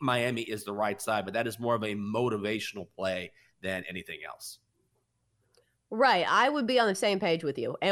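Speech, with nothing technically wrong with it.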